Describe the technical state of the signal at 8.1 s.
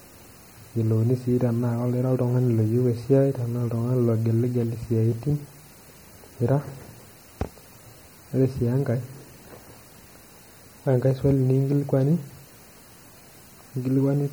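At 8.1 s the speech carries plainly audible MP3 compression damage, present throughout the clip rather than only at this moment, and the bit-starved, watery sound points to a low bitrate around 48 kbps. The likely cause is the encoder zeroing weak frequency lines that then flicker on and off between frames, giving a swirly texture. A spectrogram would show patchy, blinking gaps in the upper bands, with nothing above 21.3 kHz.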